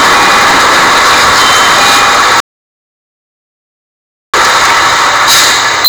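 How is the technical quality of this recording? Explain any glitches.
The technical quality is poor, with two clear faults.

Hard clipping runs throughout. The sound is driven about 24 dB past full scale, so roughly a fifth of the waveform sits flattened against the ceiling, producing harsh fuzz and bright harmonic smearing across the spectrogram.

An audio dropout to silence runs from 2.40 to 4.34 s, about 1.93 s of silence, likely from a lost input. The waveform flatlines and the spectrogram goes completely blank.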